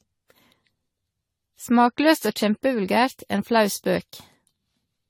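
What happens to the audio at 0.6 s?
At 0.6 s the speech sounds swirly, smeared and hollow, with softened attacks, as it does throughout the clip. The likely cause is generation loss: roughly ten rounds of lossy re-encoding, consistent with 64 kbit/s AAC-LC, each on a shifted frame grid, so artefacts pile up.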